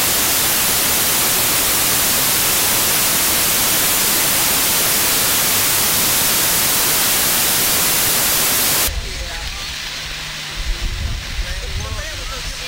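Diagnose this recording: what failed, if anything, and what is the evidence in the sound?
From the start to 8.88 s the audio is replaced by broadband noise. This is a sample-format conversion fault: samples built from the wrong bytes, where a byte offset, swapped order or misread alignment promotes the rapidly changing low bits into the most significant part of each value.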